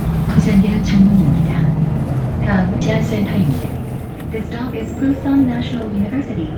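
At 2.81 s the sound jumps abruptly forward with no gap, the two sides butted almost directly together. This is a skip ahead: roughly a second of audio was discarded, in transit or by an overflowing jitter buffer, while later audio was already queued.

From 3.86 to 5.57 s the sound runs about 5% fast at unchanged pitch, and again from 5.98 s to the end at about 7%. This is jitter buffer speed-up: the receiver held excess audio and repeatedly trimmed short pitch-period pieces, around a tenth of a second and then about half that, to reduce delay.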